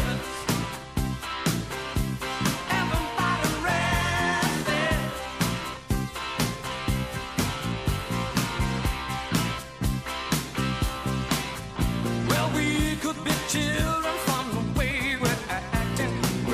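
No technical faults can be heard anywhere in the recording; the signal stays steady and intact throughout.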